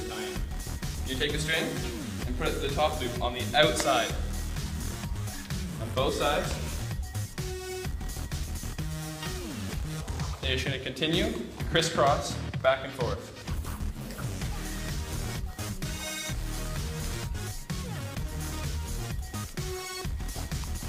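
A click or pop recurs about every 1.27 s through the audio, from 0.34 s to 20.71 s, roughly fifteen in all. These are likely clock drift buffer slips: two devices on independent clocks differing by a few hundred parts per million, so a short block of samples is dropped or repeated at each slip.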